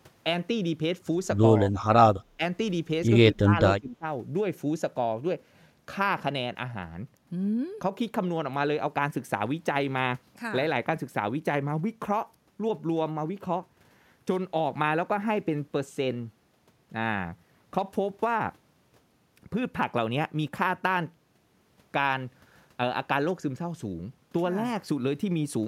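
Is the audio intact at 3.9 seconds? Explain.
No. At 3.9 seconds the speech sits inside a stretch of speech suppressed in double talk, running from 3.77 to 4.05 s and lasting roughly 0.3 s. The level sinks by up to about 20 dB and the sound thins and partly drops out before recovering. The likely cause is an echo canceller that could not tell the near talker from loudspeaker echo while both sides spoke, so it attenuated everything together.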